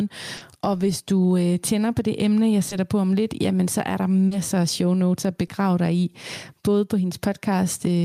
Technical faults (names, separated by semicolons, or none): gain pumping; short concealed packet loss